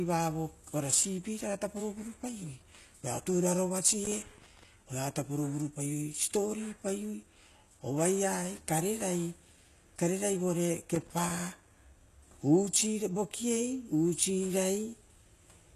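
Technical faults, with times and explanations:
Throughout, HE-AAC compression: the speech has plainly audible codec damage, and nothing reaches above 12.3 kHz. The treble is present but sounds synthetic, and sibilants come out gritty and lispy. The likely cause is a codec that encodes only the lower spectrum and fills the top by copying lower bands upward under a coarse envelope, so the harmonics there do not line up with the real ones. The degree of damage fits a low bitrate of about 16 kbps.
4.05 to 4.63 s and 10.94 to 11.39 s, loose connector crackle: two irregular bursts of scratchy crackle, about 0.59 s and 0.45 s long, sit over the speech. A worn or dirty contact is rapidly making and breaking, so the signal is chopped on and off many times within each burst. Any DC present on the line turns each break into a pop, which gives the rough, scratching texture instead of a clean dropout.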